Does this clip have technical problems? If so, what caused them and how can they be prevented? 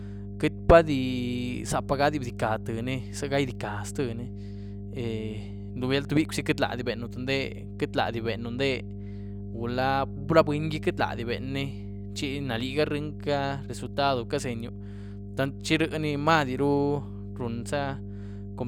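Yes. Mains hum runs through the whole speech clip: a steady 50 Hz tone, fairly loud at roughly 10 dB below the speech, from power-line current leaking in through a ground loop or nearby transformer. A spectrogram shows a constant horizontal line at 50 Hz with fainter harmonics above it. Using balanced cables, a single grounding point, and keeping the audio gear away from transformers would prevent it.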